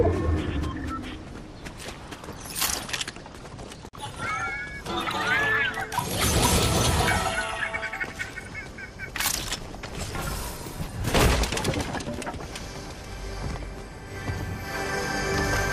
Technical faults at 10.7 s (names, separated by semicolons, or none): clock slip clicks